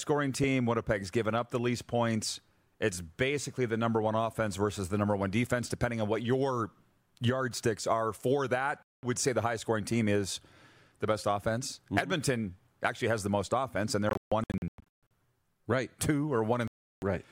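At 8.83 s, after "yardsticks are for that", the speech cuts to silence for about 0.2 s, resuming at "say the highest scoring". From 14.09 to 15.08 s, after "the most offense and", it breaks into scattered holes totalling about 0.63 s (longest 0.14 s) before "right two". After "right two", 16.68 to 17.02 s goes silent. These are a likely Bluetooth dropout: late packets are discarded, so the hole has sharp edges and speech returns further along, not where it stopped.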